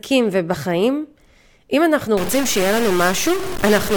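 From 2.17 s to the end, the speech turns harsh and buzzy, with noise filling the pauses, likely from a stuck bit. Samples jump by a fixed step of roughly -20 dBFS, which looks jagged on the waveform, and the spectrogram fills with broadband hash.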